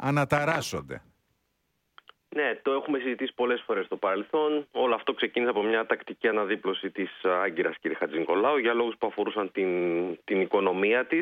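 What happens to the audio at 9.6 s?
Nothing goes wrong at 9.6 s; the audio runs through that moment intact, with no dropout, click or other fault.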